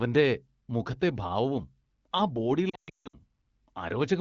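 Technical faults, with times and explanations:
2.69–3.19 s, lost AMR speech frames: after "മുഖത്തെ ഭാവവും ആ ബോഡി", about 380 ms of frames fail their checks. The wideband decoder repeats the last good pitch and vocal tract settings with falling gain, so speech warbles, drops to near silence within two frames in the longest, 160 ms run, and returns weak.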